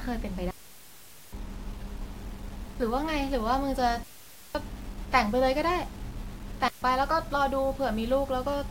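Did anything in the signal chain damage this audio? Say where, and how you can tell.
Yes. Grainy distortion follows the speech throughout, with the error sitting roughly 25 dB below it. The likely cause is a sample-format conversion truncated without dither, which fits about 7-bit depth.

The wireless link drops out three times: clean near-silent holes at 0.51 to 1.33 s, 4.03 to 4.55 s, and 6.68 to 6.82 s. There is no noise burst. This is a digital wireless dropout, where the receiver muted after losing data.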